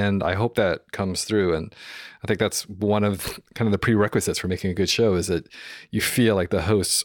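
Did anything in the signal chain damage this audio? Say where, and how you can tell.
No, nothing in the signal chain damaged this audio.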